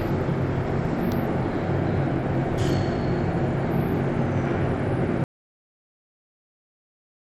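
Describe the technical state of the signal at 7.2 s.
An audio dropout to silence covers 7.2 s. It runs from 5.24 s to the end of the clip. The everyday sounds stop abruptly and what follows is silence with no background noise at all. The input was likely lost, perhaps through a failed link or disconnection, while recording carried on writing silence.

Bluetooth SBC compression, around 96 kbps, affects the clip throughout. It likely came through a Bluetooth link whose sub-band coder starved the upper bands of bits, leaving flickering treble and grit. At 7.2 s none of that damage can be heard because nothing is playing.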